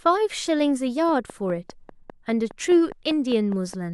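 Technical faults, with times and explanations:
1.09 to 3.93 s: train of clicks, near-identical pulses steadily at 4.9 per second, about as loud as the speech, likely from interference; even timing distinguishes it from random crackle.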